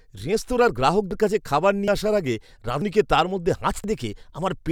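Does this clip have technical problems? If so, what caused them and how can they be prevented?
Yes. At 1.11, 1.88, 2.82 and 3.84 s the speech jumps ahead. About a tenth of a second is missing each time, with no gap. The likely cause is a dropped buffer (overrun), where audio was overwritten before being read. Larger buffers and higher capture-thread priority prevent it.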